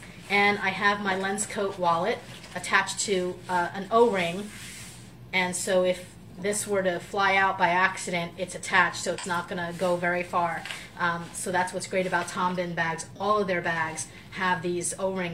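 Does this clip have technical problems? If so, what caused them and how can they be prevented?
Yes. Two brief AAC frame loss with concealment events occur, at 9.18 to 9.25 s and at 13.16 to 13.21 s. Each gap lasts about 42.7 ms, which fits a single lost AAC frame. The decoder covers the hole by reusing the last good spectrum with altered phase or smoothed energy. Each patch is too short to fade toward silence, so it sounds like a quick smeared, noisy blip. Prevention means protecting the stream from loss, with forward error correction, retransmission or a larger jitter buffer.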